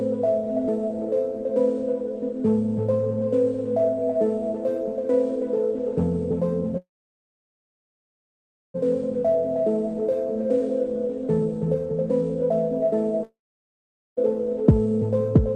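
A call audio freeze from 6.77 to 8.76 s was likely caused by packets stalling in transit until the jitter buffer ran dry. The receiver briefly extends the last sound as a fading buzz, then holds near silence for about 1.9 s. When the stream returns, it picks up exactly where it stopped, with nothing lost. Everything after that point now arrives roughly 2 s later than it should.

From 9.02 to 12.92 s, the jitter buffer speed-up follows as the delayed packets arrive in a burst and the receiver trims the excess delay. It repeatedly cuts out pitch-period-sized slices, removing about a third of a second in total. The sound plays at about 108% of normal speed with no change in pitch, so this stretch feels slightly rushed.

At 13.23 s a long network dropout begins, likely from packets that never reached the receiver at all. There is a short fading buzz of concealment, then about 0.83 s of silence. 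Audio resumes at 14.19 s, but unlike the earlier freeze it does not pick up where it left off. Roughly 0.94 s of the original sound is simply gone, so there is an audible jump in the continuity.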